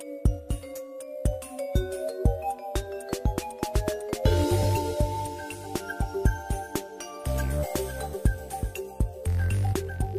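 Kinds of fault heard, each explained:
No technical fault can be heard in this audio. There is nothing to list under any kind.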